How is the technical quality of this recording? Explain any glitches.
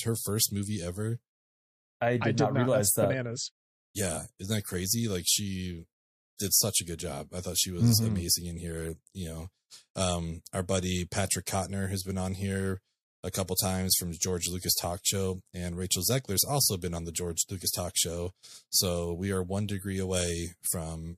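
The recording has two audible problems: codec pre-echo in two places and clock jitter near the end.

Pre-echo occurs at 6.37–6.39 s and 13.46–13.48 s. Quantisation noise spread across a roughly 36 ms transform block, with no short-block switching, leaks ahead of the attacks. This produces a brief hiss, about 33 dB and about 14 dB above the quiet passage before each attack.

Sample clock jitter runs from 18.68 s to the end. Random sampling-time error on the order of a microsecond or two adds a roughness about 30 dB below the speech, strongest on loud, bright sounds.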